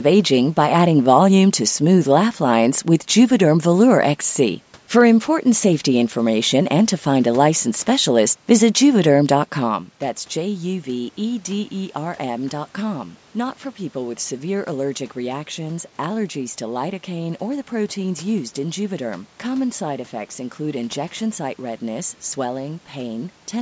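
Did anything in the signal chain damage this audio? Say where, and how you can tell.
No, nothing in the signal chain has damaged this speech. The call's microphone processing limits it to nothing above 8 kHz and trims the lowest bass, the room's background noise sits underneath, and the level shift around 9.5 s comes from the talker moving relative to the microphone.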